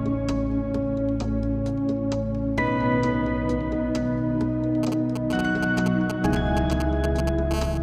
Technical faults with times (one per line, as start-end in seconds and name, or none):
4.83-7.53 GSM signalling bursts
7.54-7.78 GSM phone buzz